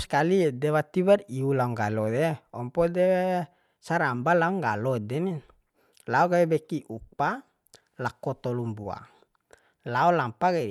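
Nothing is technically wrong with this speech recording.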